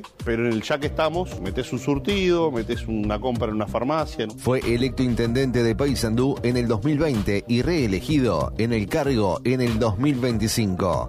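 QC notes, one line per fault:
No faults heard in this clip.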